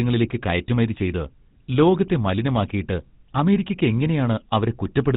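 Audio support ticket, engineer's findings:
GSM full-rate codec damage throughout the speech: buzzy, gravelly roughness, nothing above 4 kHz. Vocal-tract model driven by sparse regular pulses, consistent with 13 kbps full rate. Unlike a plain telephone band-limit, the grit sits inside the passband itself.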